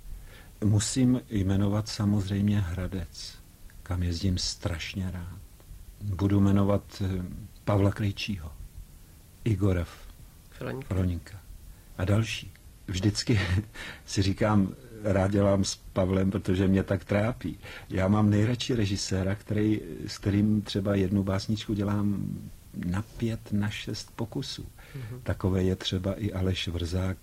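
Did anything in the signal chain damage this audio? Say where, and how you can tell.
Yes, at the network stage: adaptive stream at a lower bitrate, 12.58–20.58 s. The spectrogram shows an abrupt empty band above 14.9 kHz with an unbroken waveform, which fits a drop to HE-AAC around 24 kbit/s.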